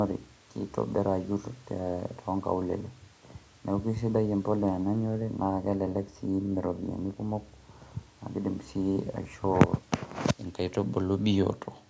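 No technical faults can be heard anywhere in this speech.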